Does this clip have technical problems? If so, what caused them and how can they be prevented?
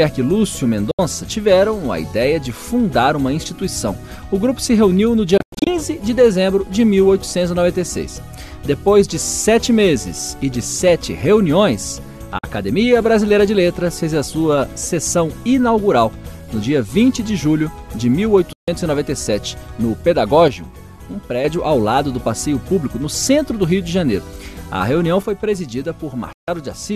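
Yes. There's a digital broadcast dropout at 0.91–0.99 s, 5.38–5.67 s (a scatter of short holes, longest about 96 ms), 12.38–12.44 s, 18.53–18.68 s and 26.33–26.48 s. The receiver muted with a quick 3 ms fade while bad frames came in, which fits roughly 24 ms frames going missing. Better aerial placement or signal strength would prevent it.

Between 20.48 and 21.44 s, and again from 25.23 s to the end, the level drops abruptly by about 6 dB. That's likely one channel dropping out before the mono sum. Checking the stereo cabling and connectors should keep both channels present.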